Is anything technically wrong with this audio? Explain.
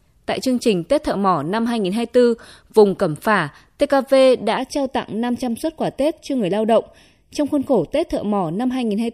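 Yes. From 4.57 s to the end of the clip at 9.14 s, the speech turns hollow and phasey, with a thin, boxy colour that stays fixed rather than moving. This is channel delay (comb filtering): one channel arrives roughly 0.4 ms behind the other, and when the two are summed to mono, the shared content cancels at evenly spaced frequencies. The first deep notch sits around 1.5 kHz, with further notches spaced regularly above it.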